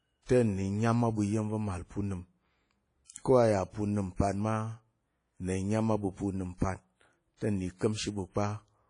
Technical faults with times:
0.00-8.90 WMA compression
3.05-3.26 pre-echo
4.15-4.19 pre-echo
7.37-7.41 pre-echo

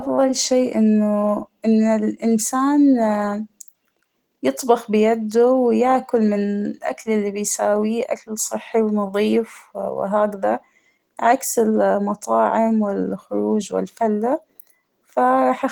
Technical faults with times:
0.00-15.72 Opus voice compression

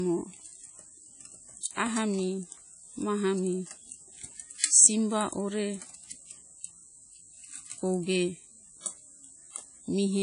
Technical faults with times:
0.00-10.23 WMA compression

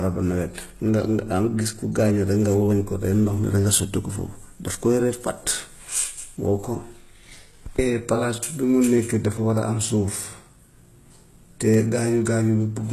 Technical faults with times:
0.00-12.93 HE-AAC compression
0.98 dropped samples
8.98 dropped samples
11.74 dropped samples

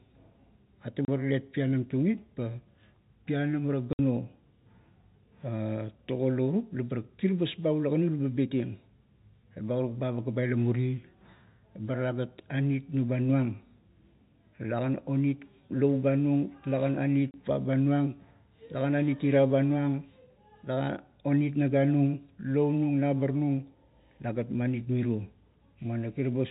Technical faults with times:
1.05-1.08 packet loss filled with silence
3.93-3.99 packet loss filled with silence
17.31-17.34 packet loss filled with silence

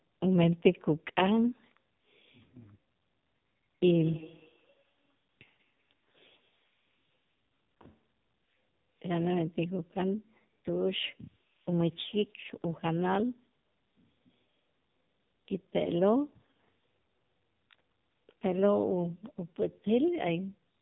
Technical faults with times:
0.00-20.81 AMR narrowband mobile codec
3.95-7.86 feedback echo between two devices

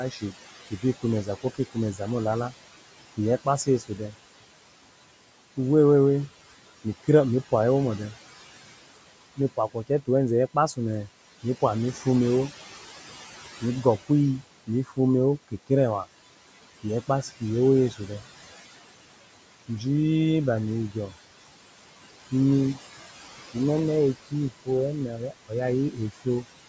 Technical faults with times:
0.00-26.69 USB whine
0.00-26.69 noise suppressor artifacts
0.11-4.14 speech cut by the noise suppressor
9.36-12.06 speech cut by the noise suppressor
13.61-15.70 speech cut by the noise suppressor
16.83-18.11 speech cut by the noise suppressor
22.31-26.45 speech cut by the noise suppressor

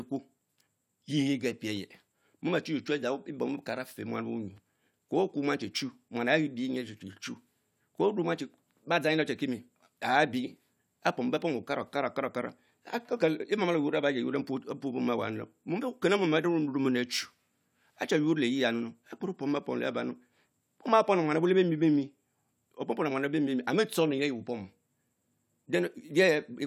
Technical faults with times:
none

